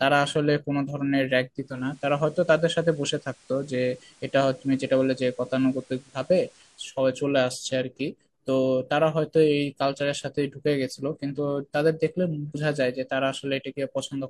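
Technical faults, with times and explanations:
1.56–7.07 s, digital radio blending to analogue: the receiver lost its digital stream and cross-faded over 0.39 s to the FM broadcast, so faint hiss sits roughly 30 dB down; a spectrogram shows a raised noise floor, with waveform level unchanged.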